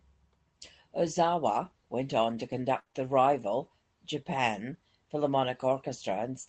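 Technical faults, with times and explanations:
2.79 to 2.87 s, burst of packet loss: Just after "went on to", about 60 ms of the stream never arrived in time. The receiver kept the last sound going and faded it down across the gap. A voiced sound turns into a short held buzz, and an unvoiced one into a dying hiss. When the audio picks up again, another 60 ms of the original has been skipped. That lost stretch is never heard.
2.87 to 2.92 s and 2.92 to 2.95 s, short concealed packet loss: Two more brief losses follow straight on, each dropping about 20 ms before "the rival". The decoder patched the first hole with about 29 ms of extrapolated sound and the second with about 10 ms. It used the previous pitch for voiced sound and shaped noise otherwise, then blended back into real audio. The result is a small smear or wobble, and a short consonant can disappear.
2.95 to 2.97 s, lost packet rebuilt from error correction: One 20 ms packet was lost here too. 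The next packet carried a low-bitrate backup copy, and Opus decoded that instead, so there is no gap just before "the rival". The rebuilt frame is coarser and noisier than its neighbours. The call runs over Opus at 24 kbps with audio up to 8 kHz, so this roughness sits within that band.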